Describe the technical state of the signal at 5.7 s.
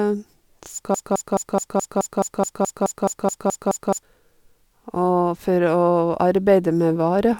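At 5.7 s the speech signal is intact, with no dropout, clipping, distortion or other fault at that point.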